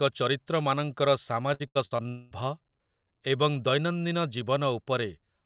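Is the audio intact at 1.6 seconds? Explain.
No. Repeated packet loss (robotic sound) runs from 1.54 to 2.07 s: five gaps, the longest 75 ms, patched by extending the last sound, leaving choppy speech with pieces missing.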